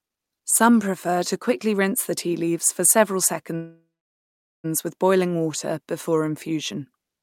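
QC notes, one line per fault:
3.55–4.66 s, call audio freeze: after "tea leaves for several" the last sound carries on as a fading buzz, then goes silent for 0.79 s. Speech resumes where it stopped, 1.09 s late with nothing lost. Likely cause: delayed packets emptied the jitter buffer.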